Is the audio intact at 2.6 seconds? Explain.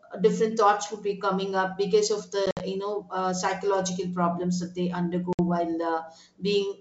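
No. At 2.6 seconds the sound is inside a burst of packet loss on an ADPCM call, running from about 2.46 to 2.62 s. About 80 ms of audio is missing, scattered over 140 ms, with the longest gap 60 ms. The lost packets are filled with silence, leaving hard-edged holes. The decoder's predictor and step size then drift from the sender's. Speech returns with brief, slight distortion before settling.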